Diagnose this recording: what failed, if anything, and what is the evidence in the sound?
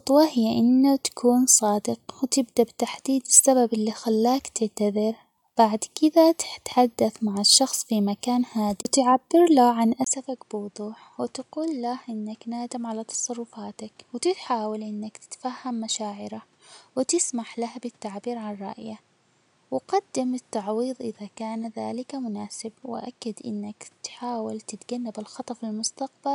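At 10.04 s the sound drops out for about 20 ms, then continues to the end of the clip with nothing above 10.5 kHz, a level roughly 10 dB lower, and a new noise floor sitting around 35 dB below the signal. That combination of a brief gap and a simultaneous shift in bandwidth, gain and noise points to the capture stage: the input was likely switched to a poorer device, with the system reopening its stream on a different microphone.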